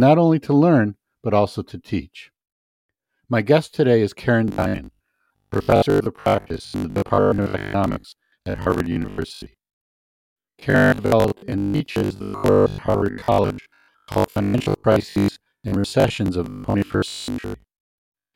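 From 4.48 s to 18.34 s the speech turns into robotic sound from repeated short buffers, likely about half the audio replaced by looped 20 ms slices, forcing a rigid 50 Hz buzz.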